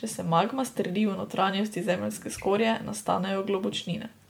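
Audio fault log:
Throughout: generation loss. The speech has a swirling, smeared, hollow quality, and consonant attacks are blurred, more than a single MP3 pass at a rate consistent with 96 kbit/s would give. This is likely from being decoded and re-encoded around five times, each pass quantising on a shifted frame grid so the errors pile up. A spectrogram shows a hard ceiling at 19.9 kHz, patchy holes and flickering smeared blocks between harmonics, and waveform onsets look softened.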